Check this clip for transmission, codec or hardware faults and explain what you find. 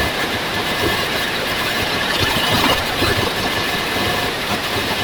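The clip has one fault, and it runs from start to finish. The audio is read two samples at a time, so it plays at double speed. The reader treats each pair of samples as a single frame, as if the stream held two channels or wider samples. Every stretch of speech therefore passes in half the time. Pitch rises by 12 semitones, a full octave. Speech sounds hurried and chipmunk-like.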